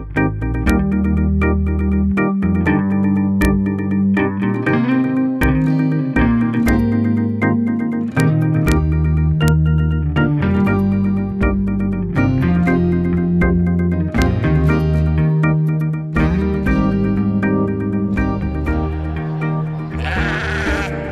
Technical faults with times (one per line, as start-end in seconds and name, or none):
0.70 integer overflow
3.42-3.45 integer overflow
5.43 integer overflow
6.68 integer overflow
8.20 integer overflow
8.68-8.72 integer overflow
9.48 integer overflow
14.22 integer overflow